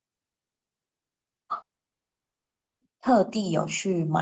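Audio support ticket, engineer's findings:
Long network dropout, 1.61–2.83 s. Sound stops abruptly, a very short concealment tail, then about 1.2 s of silence. Likely cause: packet loss on the Opus call path. Unlike a mute or pause, playback resumes further on, with that 1.2 s of content gone rather than delayed.

Automatic gain rising, 3.33 s to end. Level swells gradually over the final 0.9 s. Component: AGC in microphone processing, raising gain after a quiet input. Distinct from the talker getting louder: the background noise rises in step with the speech. Top end stops near 8 kHz throughout, consistent with the call path's bandwidth.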